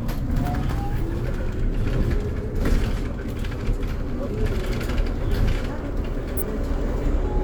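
At 0.93 s, 4.23 s and 6.37 s, brief glitches of roughly 45 to 65 ms each, heard as a chirp, squawk, click or short hole, point to damaged data in the compressed stream: corrupted bytes make the decoder misread frames, lose sync and hunt for the next valid frame header.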